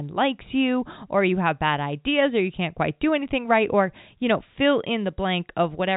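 No technical faults are audible.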